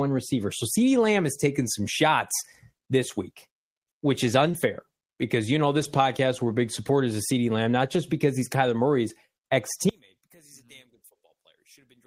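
At 4.51 to 4.55 s, just after "this week which is", a short concealed packet loss occurs: about 20 ms of audio failed to reach the decoder in time, and the receiver extended the preceding sound to bridge the gap before blending back, leaving a brief smear in the speech.

Inside that same stretch, from 4.53 to 4.55 s, a lost packet was rebuilt from error correction: the decoder played a low-bitrate copy carried in the following packet, so 20 ms sounds rougher and noisier rather than silent. The same happens from 5.79 to 5.85 s, between "because you know" and "podcast we're big", where 40 ms of rebuilt audio, which fits two separate packets, has a grainy texture.

From 9.89 s to the end, the speech level collapses by about 30 dB and the voice nearly vanishes. The likely cause is one channel inverted, so the shared centre content cancels when the two channels are summed to mono.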